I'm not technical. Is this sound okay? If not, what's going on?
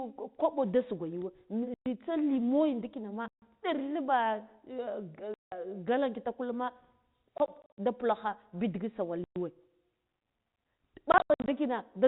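No. This speech has packet loss filled with silence: small chunks went missing in transit and were replaced by dead air with hard edges, which fits 20 ms packets. Gaps start at 1.74, 3.28, 5.34, 7.38 (before "da pulakha"), 9.24 and 11.12 s.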